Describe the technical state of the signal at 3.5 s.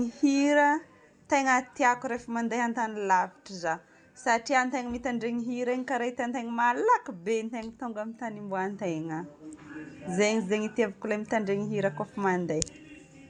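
At 3.5 s the speech signal is intact, with no dropout, clipping, glitch or other audible fault at that point.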